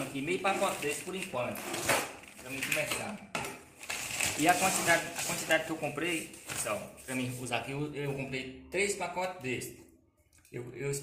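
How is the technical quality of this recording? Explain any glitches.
No technical glitches can be heard in this recording.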